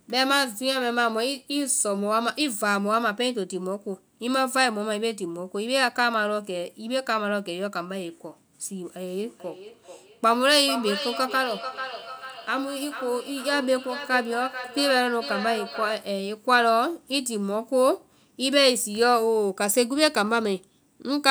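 From 9.15 to 16.16 s there's feedback echo between two devices: a second device in the same room is playing this speech back out, and this microphone picks it up again. The echo canceller only deals with its own device's output, so the returning sound gets through. Each word comes round again roughly every 0.4 s, peaking at about 10 dB below the speech, which makes the talker sound shadowed by a delayed copy.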